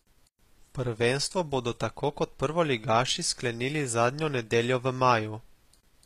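Throughout the speech the treble sounds synthetic, with gritty, metallic sibilants, likely HE-AAC compression at a low bitrate near 24 kbps; a spectrogram shows copied-looking upper bands ending at 14.9 kHz.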